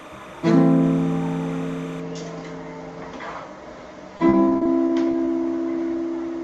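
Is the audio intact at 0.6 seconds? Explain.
No. From 0.0 to 2.0 s, a steady chirping warble sits behind the sound, roughly 20 dB below it. This is timecode bleed: linear timecode, a square wave flipping between tones near 1 kHz and 2 kHz and fitting 30-frame code, has leaked into the audio from a neighbouring track or cable.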